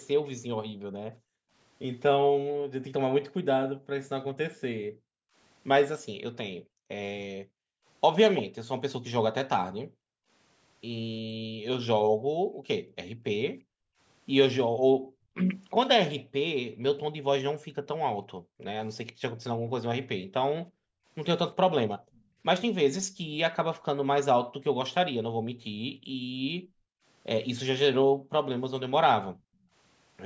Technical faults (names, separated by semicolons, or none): echo leak; background gated by the echo canceller